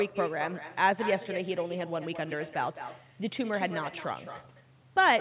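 With no echo canceller at the far end, a loudspeaker's output is picked up by the microphone there and returned down the line, so throughout the speech a quieter copy, about 11 dB down, trails each phrase by about a fifth of a second. The copy sounds thin and confined below 4 kHz, which points to a G.711 narrowband link.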